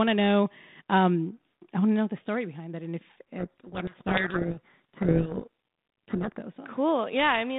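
Codec payload misread, 3.38 to 6.39 s, after "behind that and if": G.726 code words are unpacked in the wrong bit order, burying speech in harsh distortion.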